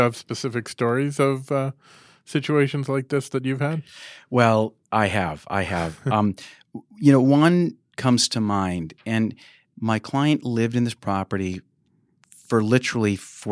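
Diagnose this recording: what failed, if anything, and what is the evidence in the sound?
Nothing failed here, and the sound gives no evidence of a fault at any stage.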